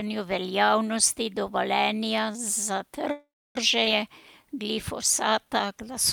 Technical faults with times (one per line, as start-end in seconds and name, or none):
3.11-3.57 call audio freeze
3.85-3.88 skip ahead
5.41-5.91 jitter buffer slow-down